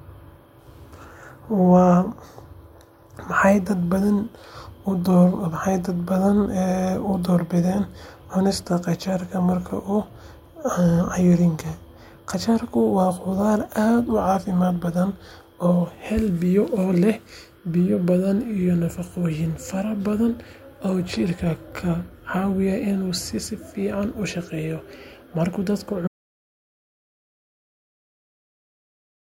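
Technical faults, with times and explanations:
26.08 s to the end: audio dropout to silence. The speech cuts off abruptly and the last 3.2 seconds are dead digital silence with no room tone at all, likely because the input signal was lost while the recorder kept writing silence to the file.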